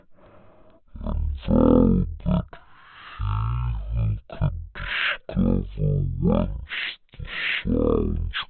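From start to finish the speech plays at the wrong sample rate. It sounds deep, dragged and sluggish. Samples taken at 44.1 kHz run out at 16 kHz with no conversion. Everything moves at 0.363 times normal speed. Pitch falls by about 17.6 semitones.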